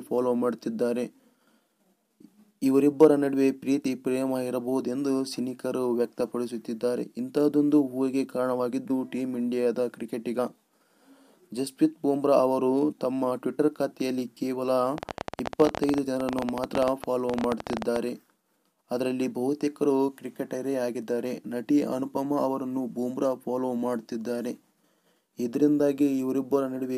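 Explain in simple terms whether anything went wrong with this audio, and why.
A train of clicks runs from 14.98 to 17.97 s: about fifty sharp, similar ticks, roughly 16 per second at an uneven pace, standing out clearly above the sound. Something was injecting repeated pulses, likely electrical interference or a faulty connection or power supply.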